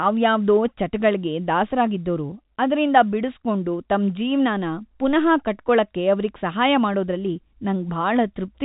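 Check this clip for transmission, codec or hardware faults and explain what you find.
No transmission or hardware faults are present in this speech; the telephone-style band limit, with nothing above about 3.8 kHz, is consistent with normal G.711 coding rather than a defect.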